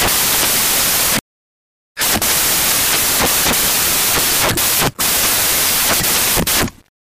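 From the first moment to the end, the audio suffers from samples built from the wrong bytes. The reader has assembled each sample from misaligned or reordered bytes, so the rapidly changing low-order bits now occupy the most significant positions. The result is loud, harsh broadband noise covering the whole clip, close to white on the loud passages.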